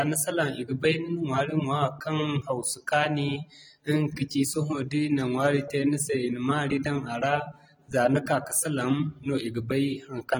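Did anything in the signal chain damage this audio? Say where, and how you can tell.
Yes, at the codec stage, throughout the speech: AAC compression, most likely AAC-LC at a low rate, around 32 kbps. The damage is plainly audible as a dull, smeared quality with a watery, fizzy texture on sibilants and held vowels. The quantiser is starving some frequency bands between frames. Content stops at 19.5 kHz, so this is not a plain low-pass or resampling fault. That would remove the top cleanly but leave no swirling, time-varying texture.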